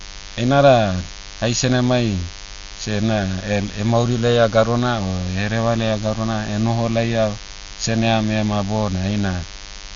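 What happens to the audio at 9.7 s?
At 9.7 s the speech carries a thin, steady buzz at 100 Hz with many harmonics, present through the whole clip rather than just at that moment. It is DECT cordless phone buzz: a nearby handset or base station transmits a radio burst every 10 ms, and the audio circuitry rectifies it. Unlike mains hum, the buzz sits at 100 Hz and sounds rasping rather than smooth, at a level well below the speech.

The speech at that point also sounds dull, with nothing above about 6.9 kHz and a rough, fluttering noise clinging to voiced tones, again throughout the clip. This is likely Dolby Digital compression at a low bitrate, consistent with around 48 kbps: the encoder narrowed the band and left many frequency lines without mantissa bits, which the decoder fills with dither noise. That dither flutter distinguishes it from a simple low-pass filter.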